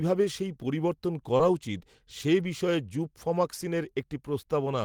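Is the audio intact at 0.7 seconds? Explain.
Yes, at 0.7 seconds the speech plays through intact, with no audible fault at that moment.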